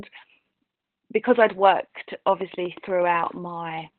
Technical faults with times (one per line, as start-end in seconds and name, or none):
0.00-3.99 Opus voice compression
2.41-3.27 train of clicks